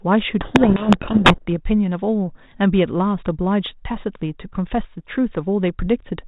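From 0.41 s to 1.53 s the speech is buried in harsh, grinding distortion, a codec payload misread. The G.726 code words arrive with their bits in the reverse order, so the decoder turns valid-looking values into wrong prediction differences and the waveform goes badly off course. This distortion swamps the speech and stops abruptly at 1.53 s, leaving only the light 32 kbit/s coding texture.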